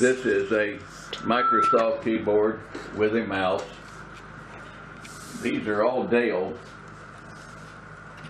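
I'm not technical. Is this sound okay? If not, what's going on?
No. From 1.14 to 1.98 s there's loudspeaker feedback squeal: a mic hears its own speaker, and a 1.3 kHz tone swells into a shrill whine over about a third of a second.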